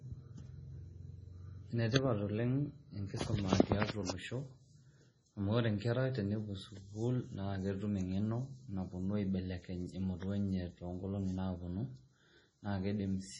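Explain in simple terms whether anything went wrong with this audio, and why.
Heavy MP3 compression is the likely culprit, running through the whole recording. When an encoder has too little data to spend, it throws away the top of the sound and drops quieter details, which then flicker in and out moment to moment. Here nothing survives above about 10.5 kHz, so the speech loses its crispness, and the flickering leaves a watery, swirling quality, with metallic chirps on s sounds and blurred starts to syllables.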